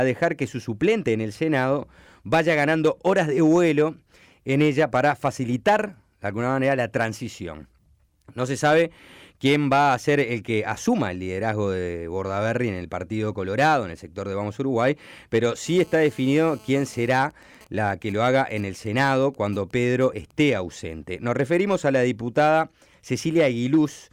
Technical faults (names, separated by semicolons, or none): GSM phone buzz; GSM signalling bursts